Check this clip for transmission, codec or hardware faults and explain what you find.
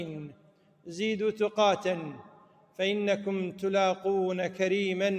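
A speech-tuned noise suppressor has been left active on non-speech audio, and it causes both a continuous level problem and two distinct dips.

Throughout the clip, the noise suppressor is applied to non-speech sound. Its gain swings by around 10 dB as it decides, moment to moment, whether the signal is wanted or is background. Steady components and decaying tails are classed as noise and pulled down, while sharper onsets pass. The result is audible pumping and a thinned, fluttering body to the sound, with level dipping between attacks rather than holding.

From 0.30 to 0.87 s and again from 2.23 to 2.79 s, the noise suppressor turns the sound down further. In each stretch, about half a second of material is pushed down harder than the surrounding audio, by about 12 dB at the deepest point. The suppressor has treated sustained or fading content there as noise, so that content sinks in level and its decay is clipped short. 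Any abrupt transients in those windows come through largely intact.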